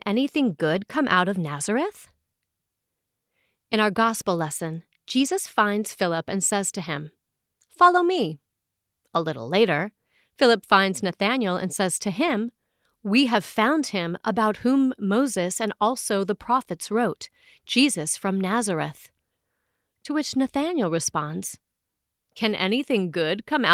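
At 0.75–0.77, 5.19–5.29, 12.27–12.33 and 16.17–16.19 s, lost packets are rebuilt from error correction: brief rough, noisy stretches with no gap or smeared repeat, unlike guessed concealment.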